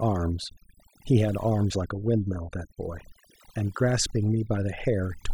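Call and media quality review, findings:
Overdone noise removal, throughout. Background drops and breaks up into twinkling specks. Noise suppressor set too aggressive: bands near its noise estimate are pulled far down or off, quieter speech components removed with them.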